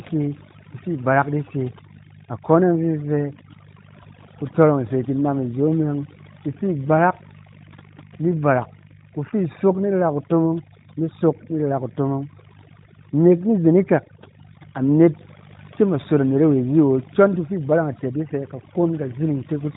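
A steady, raspy buzz runs under the speech from start to finish, sitting roughly 20 dB below it. This is mains buzz: 50 Hz switching spikes leaking in and spreading harmonics well up the spectrum. Throughout, the background collapses to near silence dotted with twinkling specks. That is overdone noise removal, pulling bands down so hard that quiet speech detail goes with the noise. The narrowband mobile-codec band limit near 3.8 kHz can also be heard.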